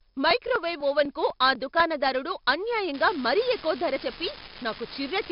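A gritty hiss rides on every loud syllable of this speech from start to finish, with roughness on sharp attacks and nothing above 5.3 kHz. That is heavy 4-bit ADPCM compression: each sample is coded as a coarse step from a prediction, which fits a rate near 44 kbps.

From 0.06 s to 1.80 s, regular ticks fall about every 0.25 s while the speech runs. These are periodic USB or driver dropouts: the audio path stalls at a fixed interval and roughly a millisecond of sound is skipped each time, around seven times in all.

From 2.94 s to the end, a steady crackle and fizz covers the speech and continues through the pauses. This is an unreliable data bit: one marginal data line flips in random samples, and each error adds a spike of the same size.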